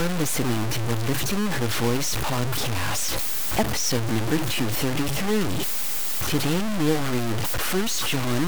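Right through the speech there's harsh grainy distortion tracking the voice, with quiet bits sputtering out, likely low bit depth without dither, truncated to about 3 bits.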